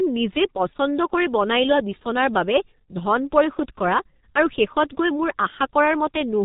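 From start to finish, the speech carries heavy G.723.1 codec damage. Nothing survives above 3.8 kHz, and consonants smear into a muffled, hoarse texture. Unlike a plain telephone band limit, the voice model updates sluggishly, which fits a bitrate near 6 kbit/s.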